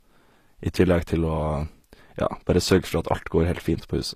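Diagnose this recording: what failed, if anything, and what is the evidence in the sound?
At the codec stage, this is likely low-bitrate audio saved at a high bitrate: the speech went through a low-rate encode first, then was re-saved as high-rate MP3. Nothing remains above 14.9 kHz throughout, a ceiling the first encode set and the second cannot restore.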